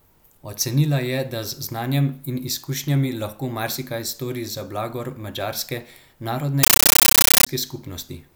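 A Dolby Digital (AC-3) bitstream reached the output as though it were ordinary samples, so it was never decoded: a compressed stream played as audio, from 6.63 to 7.47 s. Each frame arrives as a burst of noise about 13.3 ms long followed by silent padding, repeating 31.25 times a second, a pattern that fits a 640 kbps stream. The speech is replaced by very loud, harsh static with a rapid chattering flutter.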